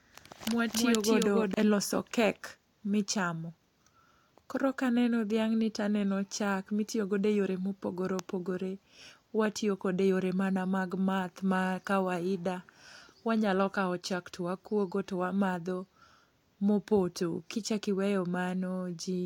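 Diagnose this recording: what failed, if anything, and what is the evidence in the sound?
Doubled audio track, already running at 0 s and ending abruptly at 1.54 s: a dry, full-band copy of the speech trails roughly 300 ms behind at about the same level. A second, slower capture path was likely mixed in with the first.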